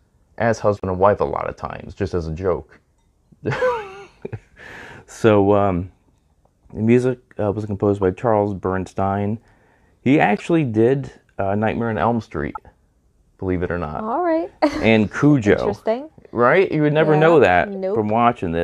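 Six short bursts of corrupt frame decoding break into the speech: 0.77–0.84 s, 3.52–3.58 s, 8.02 s, 10.37–10.41 s, 12.55–12.57 s and 17.75 s. In each, a few damaged compressed frames were decoded as though valid, so misread gains put energy at the wrong frequencies. The result is a chirp or noisy blip, loudest near 0.77 s and faint by 17.75 s. Unlike a dropout or concealed loss, foreign sound appears instead.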